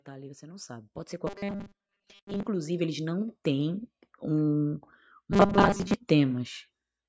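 From 0.05 to 4.59 s, automatic gain rising lifts the speech and background together by about 14 dB as the control slowly raises gain on quiet input. From 1.27 to 2.46 s and again from 5.32 to 5.94 s, the voice becomes a rigid, metallic 200 Hz buzz. This robotic sound likely comes from repeated short buffers: 5 ms chunks are looped to cover late audio, replacing most of the real signal.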